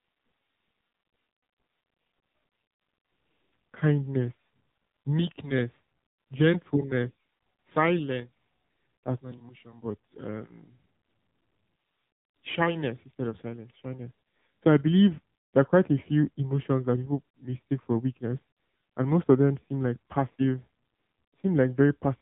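From start to finish, the speech has passed through the AMR narrowband mobile codec. Nothing above 3.8 kHz survives, so the sound is muffled and boxy. At 7.4 kbps the codec damage is plainly audible. The voice comes out buzzy and synthetic, rebuilt from a few pulses per short frame.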